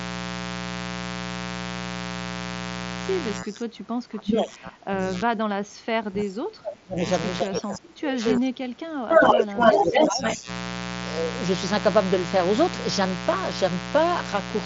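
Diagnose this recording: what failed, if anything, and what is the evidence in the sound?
The analogue wiring stage shows mains buzz for the full length of the recording. A steady, raspy 60 Hz buzz sits only about 10 dB below the speech. Its rough, edgy character comes from sharp switching spikes twice per mains cycle, produced by something like a dimmer, a rectifier or an unshielded cable. These spikes generate a dense ladder of 60 Hz harmonics that reach well into the kilohertz range rather than producing a clean hum.

The call-processing stage shows speech suppressed in double talk, from 3.38 to 7.05 s and again from 7.42 to 10.49 s. During these stretches the talker's level sags and breaks up, dropping by up to about 25 dB. The likely cause is that the far end was talking at the same time. The echo canceller then could not tell the local voice from loudspeaker echo, so it attenuated everything it could not classify.

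The call-processing stage also shows echo leak, in two bursts from 9.11 to 9.39 s and from 9.59 to 10.34 s. A delayed copy of the speech trails the original by 0.25 s. The likely cause is a loudspeaker-playing endpoint whose echo canceller did not fully cancel what its microphone picked up, so the residue was transmitted back. These bursts fall inside the second suppression window. The wideband mSBC Bluetooth headset path shows only light graininess.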